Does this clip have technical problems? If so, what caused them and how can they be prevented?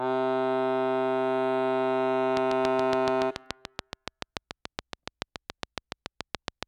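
Yes: a regular train of clicks, about 7 per second, runs from 2.37 to 6.64 s, likely from interference or a faulty connection, showing as evenly spaced vertical spikes and lines. Shielding cables and fixing the connection prevents it.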